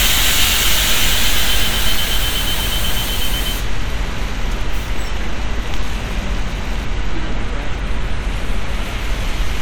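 No technical faults can be heard in this audio.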